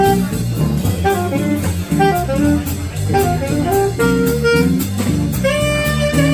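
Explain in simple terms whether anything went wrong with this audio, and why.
Nothing went wrong here.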